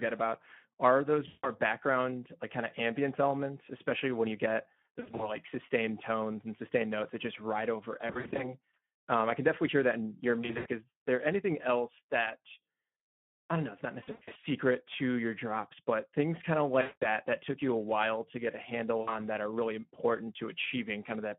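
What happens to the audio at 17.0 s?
Between 16.81 and 17.06 s the VoIP packet loss is concealed by the speech codec. About 200 ms of audio is missing, which fits ten lost 20 ms frames. The decoder extends its last pitch and filter at falling gain. This gives a buzzy tone or coloured noise that fades. On a spectrogram it looks like smeared, repeated harmonics or blurred noise that gradually darkens, and the waveform envelope tapers. The Speex codec damage that runs through the whole clip is also present here. The band is confined to about 150 Hz to 3.4 kHz, with plainly audible coding roughness at 11 kbps.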